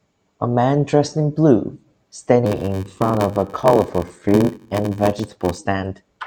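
From 2.44 s to 5.58 s the speech carries a block size mismatch (padded). One stage is handing over shorter blocks than the next stage reads, and the shortfall in each block is filled with silence. The gap repeats at 93.8 Hz, which fits a 512-sample read block, and is heard as a steady buzz under the speech. The inserted gaps stretch the timing to 0.861 times normal speed, so delivery drags while the timbre stays.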